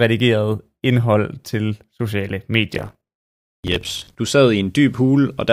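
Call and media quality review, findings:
Processor overload crackle, 2.75 to 4.15 s, after "indhold til sociale", clearing before "du sad". Gritty tearing over the speech. Audio processing thread overloaded, missing dozens of deadlines on buffers of roughly 10 ms. Each miss replays stale audio with hard edges.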